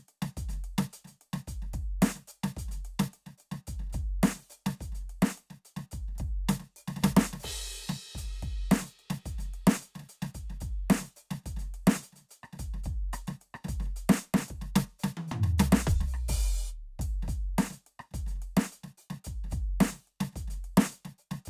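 No technical faults can be heard anywhere in this music clip. Nothing in the recording breaks off, distorts or drops out at any point.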